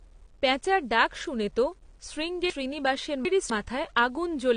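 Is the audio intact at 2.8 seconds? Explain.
No. From 2.5 to 3.5 s, chunks are out of order: a 250 ms chunk plays three chunks late. It sounds jumbled, but unlike a dropout nothing is missing.

Grainy distortion also rides on the sound here, about 40 dB below it. It follows the signal rather than sitting as steady hiss, which likely points to 9-bit rounding without dither.

The audio stops at 9.6 kHz, and smeary codec artefacts remain. Unlike a simple low-pass filter, this likely points to low-bitrate audio saved at a high bitrate, a 32 kbit/s AAC re-encoded as 256 kbit/s MP3.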